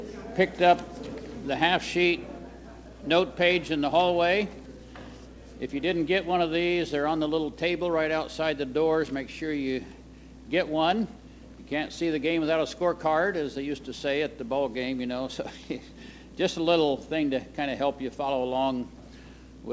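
Nothing stood out on listening; the audio carries the ordinary character of a call connection, with its content stopping at about 8 kHz in a way that fits a G.722 codec at 64 kbps.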